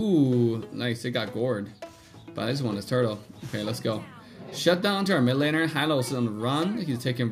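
No technical faults are audible.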